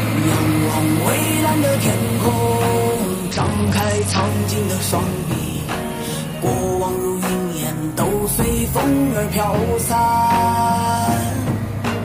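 A Bluetooth SBC bit pool drop runs from 3.32 to 4.29 s in this audio: the treble dulls and gritty noise rises, consistent with the encoder cutting its bit pool to about 9, near 72 kbps, starving the upper sub-bands and coarsening the rest before recovering.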